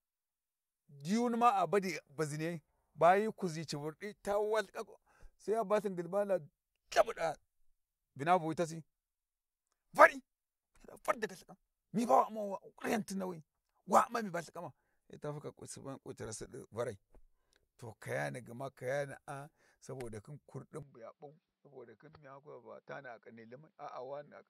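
At 20.83 s the speech turns duller and a little quieter, with nothing above 5.7 kHz and no gap. This is likely an input switched to a poorer device.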